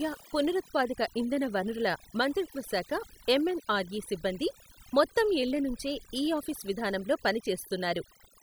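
Overdone noise removal runs through the whole speech clip. A noise reduction stage was set too aggressively. It judged many frequency bands to be noise and pulled them down hard or shut them off. Quieter parts of the voice fell below its threshold and were removed too. Between phrases, the background drops and breaks up into twinkling specks.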